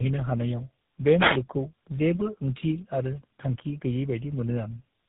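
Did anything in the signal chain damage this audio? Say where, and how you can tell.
Yes. Tandem speech coding at the codec stage: three speech coders in a row, the last GSM full rate, roughen it throughout. The spectrogram stops near 3.8 kHz, with smeared harmonics.

A wireless microphone noise hit from the analogue radio link at 3.15–3.19 s, after "जेबो ओंथि आरो": a fade lets receiver static through, seen as a brief broadband stripe.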